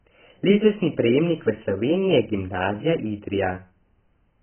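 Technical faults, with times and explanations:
Throughout, AAC compression: the speech sounds heavily dulled and watery, with nothing above 3.1 kHz, likely AAC-LC at a bitrate that fits about 12 kbps. A spectrogram shows a flat ceiling at that frequency.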